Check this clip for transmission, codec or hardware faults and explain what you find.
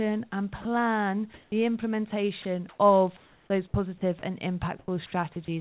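The speech has voice-detector faults at five points, all of them gaps in transmission filled with synthetic noise. The narrow band, with nothing above 4 kHz, fits a G.711 call path. Room noise sits about 40 dB below the speech.

Sound dropped by the voice detector, 0.62–0.65 s and 5.45–5.48 s. The sender's detector likely judged a quiet stretch of speech to be background and stopped sending. The receiver filled each gap with comfort noise. About 30 ms of speech is lost in the first and about 20 ms in the second. Each is heard as a tiny clip in the speech, where the sound briefly gives way to steady noise or near silence before resuming.

Comfort noise in place of the background, 1.34–1.52 s and 4.79–4.88 s. During these pauses the sender likely went silent under discontinuous transmission, and the receiver generated noise roughly matched to the background. The real room sound, at about 35 dB and 31 dB below the loud parts, is swapped for featureless noise. 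It is about 2 dB louder in the first pause and about 2 dB quieter in the second, so the background shifts level and texture.

Sound chopped by the voice detector, 2.42–4.22 s. Over this stretch the detector likely toggled between sending and not sending more than once. About 480 ms in total was replaced by comfort noise. The speech has two or more holes, which makes it choppy.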